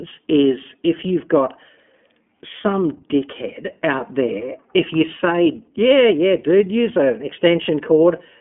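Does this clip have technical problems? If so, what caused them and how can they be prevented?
Yes, the whole speech clip carries iLBC codec damage: the band is cut to a phone line's 200 Hz to 3.4 kHz with nothing above 3.7 kHz, and each 30 ms frame is coded on its own, giving a plainly rough, synthetic edge that fits the 13.33 kbps mode. To prevent it, record locally or use a wideband codec such as Opus.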